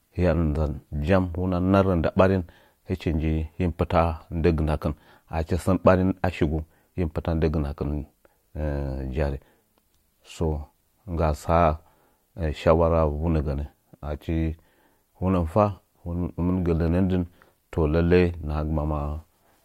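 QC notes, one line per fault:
Nothing stood out on listening to this speech recording.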